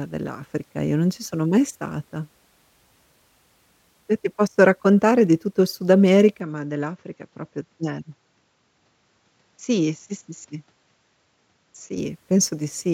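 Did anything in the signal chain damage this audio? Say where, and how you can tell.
Yes, at capture. From 6.40 to 11.98 s, speech loses everything above 7.6 kHz, drops about 5 dB, and gains faint noise. Likely an input switched to a poorer device.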